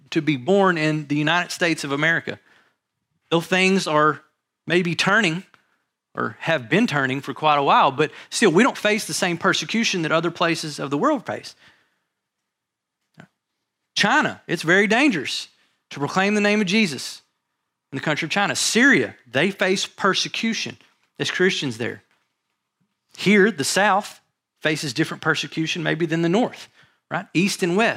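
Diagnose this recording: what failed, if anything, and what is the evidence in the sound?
Nothing failed in this speech recording at any stage of the chain. No event in the sound calls for a diagnosis.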